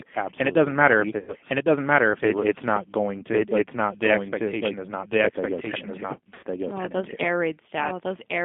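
Throughout, the speech passes through the G.729 codec at 8 kbit/s, which rebuilds it from a coarse model within a 200 Hz to 3.5 kHz band, leaving it plainly rough and synthetic. A second full-band copy of the whole track runs about a second behind at roughly equal level, with no decay or room colour; this doubled audio track likely comes from a second, slower capture path. From 1.19 to 1.34 s and again from 6.34 to 6.44 s, VoIP packet loss concealed by the speech codec: about 90 ms of audio goes missing, and the decoder stretches its last sound into a fading buzzy tone or coloured noise that stays weak briefly afterwards.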